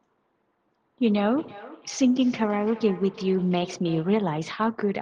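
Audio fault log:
1.38–4.23 s, feedback echo between two devices: the speech comes back at roughly a third of a second, each repeat thinner and more ringing than the last, peaking about 19 dB below the voice. A second device in the room is replaying the call into a microphone whose echo canceller only knows its own output.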